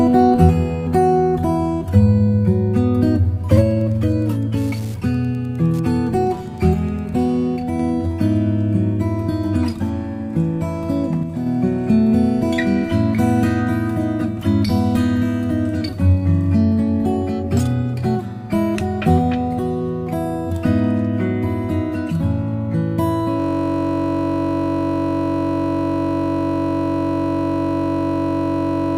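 From 3.65 to 7.23 s, Wi-Fi interference: beacon bursts every 102.4 ms get rectified, giving faint ticking about 35 dB down, seen as evenly spaced vertical broadband lines.

At 23.40 s a system hang loop begins and lasts to the end: a 21.33 ms fragment, which fits a 1024-sample buffer, repeats as a 46.9 Hz buzz, showing identical repeating waveform cycles.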